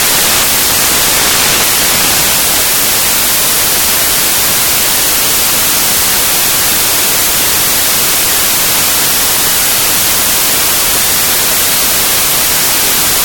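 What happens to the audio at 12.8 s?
At 12.8 s, as across the whole clip, the samples are built from the wrong bytes: misassembled low bits dominate each value, producing loud, harsh broadband noise.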